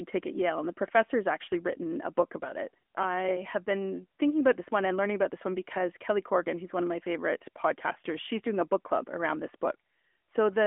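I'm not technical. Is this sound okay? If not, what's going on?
No. The AMR narrowband mobile codec affects the whole clip, from start to finish. This is the way older mobile phone calls squeeze speech down: the voice passes through a narrow phone-line band, roughly 250 Hz to 3.4 kHz, and nothing above about 3.6 kHz survives. The codec then rebuilds the voice from a simplified model, so it sounds muffled, thin and noticeably buzzy and synthetic, like a caller on a mobile phone.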